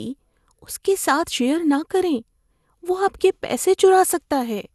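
Generation loss runs throughout: the speech sounds swirly, smeared and hollow, consonant attacks blur, and nothing reaches above 12.6 kHz. The likely cause is around ten lossy re-encodes, each requantising on a shifted frame grid, which fits repeated MP2 at 128 kbit/s.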